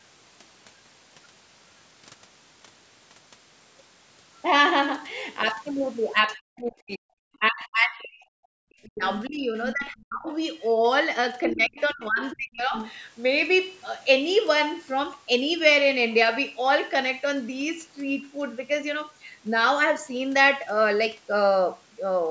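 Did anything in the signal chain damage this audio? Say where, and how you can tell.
Yes. The speech is pulled down in three stretches, 6.36 to 7.06 s, 7.39 to 10.3 s and 11.47 to 12.74 s, dropping by up to about 40 dB in the first two and about 35 dB in the third, with gaps and dips rather than a steady fade. This is speech suppressed in double talk, likely at the call processing stage: during simultaneous talk, the echo canceller's suppressor could not tell the near talker from loudspeaker echo and attenuated both.

A second, fainter voice also breaks through in short scraps at 9.69 to 9.81 s, 11.46 to 11.81 s, 12.32 to 12.36 s and 12.73 to 12.92 s. It sits about 5 to 20 dB below the main speech, loudest near 11.5 s. This is the other side's voice leaking through, likely from the same echo canceller failing to remove loudspeaker pickup from the microphone while it was busy with double talk. 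The leakage lines up with the suppressed spans.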